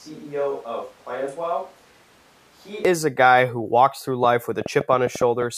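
A speech recording that opens already sounding like a switch to a distant microphone, lasting until 2.85 s. Over that stretch the speech is roomy and hollow, thinner in the bass, about 10 dB quieter, with background noise sitting roughly 25 dB below the speech. The likely cause is that the close microphone dropped out and a farther one, such as a camera's, carried the audio. What separates this from a simple level dip or added reverb is that tone, level and noise floor all change together and snap back abruptly at 2.85 s. From 4.25 s to 5.43 s a train of clicks rides over the sound: around ten sharp, similar pops at roughly 6.8 per second, unevenly spaced, peaking about 10 dB above the signal. Because each click has the same short shape, this is distinct from random crackle or from dropouts, which remove sound rather than add it. The likely cause is interference from nearby equipment or a faulty connection or power supply.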